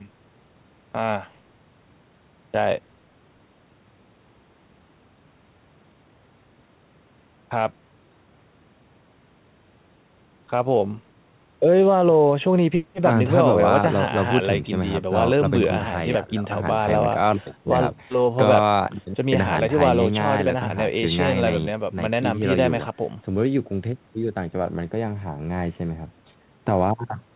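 No faults detected in the speech; the call path carries it as narrowband audio with nothing above 4 kHz, consistent with G.711 mu-law.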